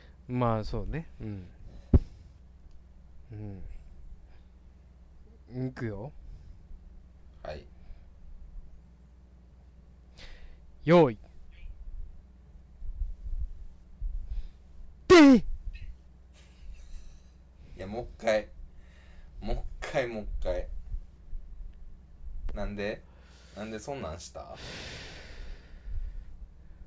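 No technical faults can be heard.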